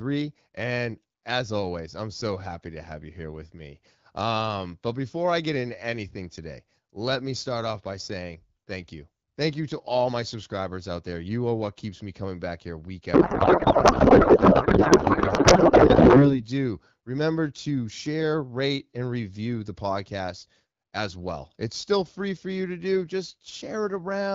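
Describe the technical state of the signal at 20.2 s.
At 20.2 s the signal is intact, carried through the AMR wideband (HD Voice) codec at 12.65 kbit/s with nothing faulty audible at that moment.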